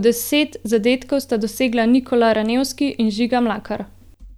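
No technical faults can be heard anywhere in the recording; the signal stays continuous and stable throughout.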